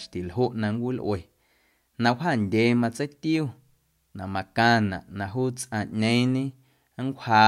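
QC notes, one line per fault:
No faults found.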